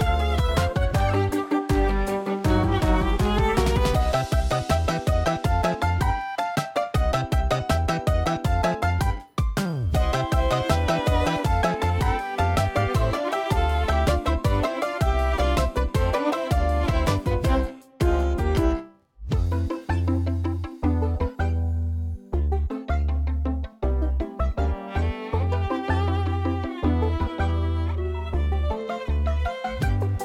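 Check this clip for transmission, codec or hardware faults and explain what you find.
No transmission, codec or hardware fault can be heard anywhere in the clip. There is nothing to flag.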